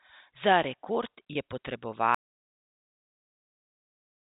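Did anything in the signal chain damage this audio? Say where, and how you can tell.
Yes, at the network stage. From 1.33 to 1.35 s the speech briefly holds on a slightly buzzy, sustained tone instead of moving on, then picks up again. That is packet loss with pitch repetition. About 20 ms of audio went missing, which fits two 10 ms packets, and the receiver filled the hole by looping the last pitch period it had. The gap was short, so the loop never had time to fade toward silence.

From 2.15 s to the very end, the audio drops to complete silence with no room tone at all. This is an audio dropout to silence. The sound cuts off mid-flow and never returns, so everything after that point is lost. Silence with no room tone most likely means the input failed upstream, through a lost device, a dropped link or an accidental mute, while the recorder kept writing samples. The band-limited telephone sound of the G.711 mu-law coding is present up to that cut.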